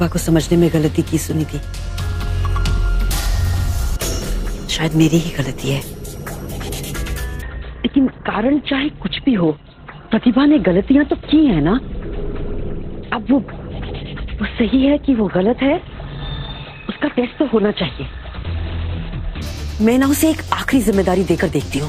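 From 7.42 s to 19.42 s, the adaptive stream drops to a lower bitrate as the connection falters, which fits a fall from about 64 to 12 kbit/s Opus. For those 12 seconds the sound turns abruptly dull and smeared, with nothing above 4.3 kHz, and no gap at either switch.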